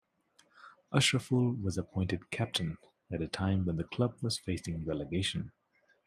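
No technical faults occur at any point in the speech.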